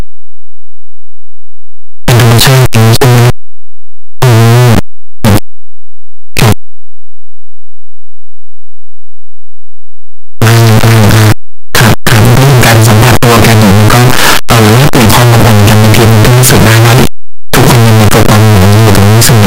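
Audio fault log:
throughout, signed and unsigned mixed up: speech is loud, harsh distortion, quiet passages as loud as the rest; likely 8-bit samples read with the top bit flipped.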